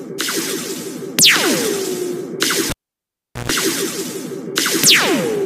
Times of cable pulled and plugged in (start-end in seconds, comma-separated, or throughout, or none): 2.70-3.50